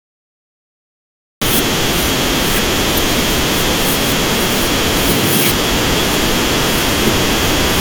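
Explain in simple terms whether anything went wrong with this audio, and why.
For the first 1.42 seconds there is dead digital silence, and then the speech bursts in mid-sound with no natural build-up. That is a cut-off start: the recording or stream began late, so the opening of the speech was never captured.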